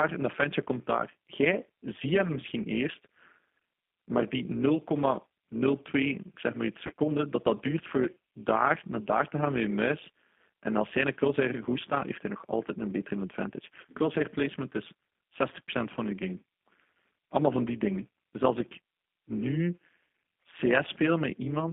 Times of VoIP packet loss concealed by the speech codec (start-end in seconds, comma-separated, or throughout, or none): 6.87-6.92